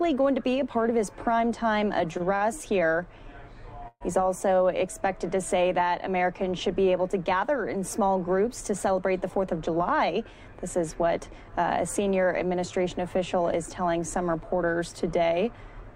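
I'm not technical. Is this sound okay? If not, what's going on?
No. There are three kinds of fault.

At 2.17 s and again from 2.36 to 2.43 s there is a short stall from a late packet. A piece of the audio arrived late, so the receiver held the last sound in place until it came, about 22 ms the first time and 50 ms the second. Nothing is lost, but the sound briefly sticks and may buzz slightly before carrying on.

From 3.88 to 4.03 s there is a call audio freeze. The sound hangs and buzzes for about 128 ms, including about 40 ms of silence, then resumes exactly where it stopped. A pause has been added, but nothing is missing. The likely cause is a delay in the network holding up the incoming audio, so the receiver ran out and had to fill the wait.

From 9.21 to 11.49 s there is a jitter buffer speed-up. After the earlier delays the receiver had stored more audio than it needed, so it trimmed many tiny slices, about a tenth of a second in total, to catch up. 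Over those two seconds the audio plays about 5% fast at the same pitch and can sound slightly hurried.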